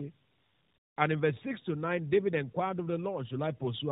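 From start to finish the speech carries tandem speech coding: it passes through AMR-NB at 12.2 kbit/s, is decoded to G.711 A-law, then coded again by AMR-NB. The second coder models the first one's errors as if they were speech, so the damage stacks. The result sounds rougher, duller and more warbly than a single AMR link. A spectrogram shows a hard ceiling at 3.8 kHz and smeared, unsteady formant bands.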